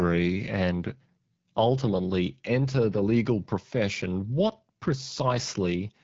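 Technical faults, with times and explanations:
Throughout: AMR wideband (HD Voice) codec. The speech sounds rough and raspy, which fits one of the lowest rates, near 8.85 kbit/s, where the pulse-driven vocal tract model is starved of bits. Above 6.4 kHz the band is synthetic shaped noise, and nothing remains above 7.6 kHz.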